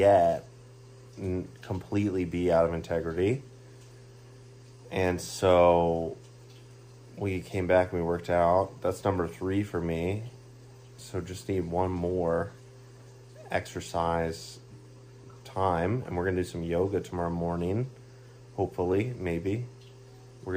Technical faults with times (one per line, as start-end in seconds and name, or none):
none